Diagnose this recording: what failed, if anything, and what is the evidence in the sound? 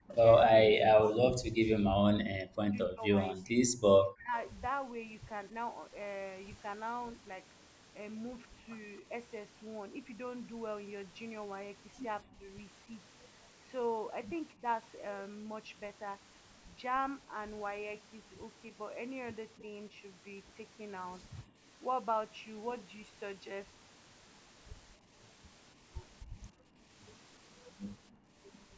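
The speech sinks and breaks up in the opening stretch, from 0.0 to 5.55 s. For around four seconds of that span it is pushed down by as much as roughly 40 dB, so parts nearly vanish. Shallower dips of about 10 dB follow at 12.24–14.65 s, 19.6–21.68 s and 24.97–27.41 s, each lasting a fraction of a second to about a second. This is likely speech suppressed in double talk: the call processing's echo canceller took simultaneous talk for loudspeaker echo and turned the near talker down.

A faint, short echo leak appears at 0.09–0.15 s. It is a delayed copy arriving about 259 ms behind the original and sitting roughly 25 dB below the speech. The likely cause is the loudspeaker side's echo canceller missing part of what its microphone caught from the loudspeaker and sending that residue back. It sits inside the same call-processing stage as the suppression above.

Near the end, at 28.11–28.35 s, the background room sound drops by 18 dB for about 0.2 s and then comes back. 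This is background gated by the echo canceller: while the loudspeaker path was active, the canceller clamped the microphone hard, taking the ambience down with it, then released. The band-limiting to 8 kHz from the call's microphone processing is present throughout and is expected.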